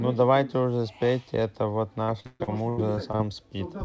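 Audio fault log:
2.04–3.21 s, repeated packet loss (robotic sound): eight dropouts, longest 136 ms, each papered over by repeating the last sound, so a third turns choppy with pieces missing.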